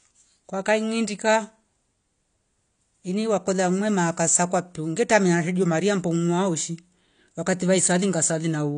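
Throughout, the speech was likely passed through low-bitrate AAC compression, which strips everything above 9.8 kHz, leaving it dull and smeared with fizzy sibilants.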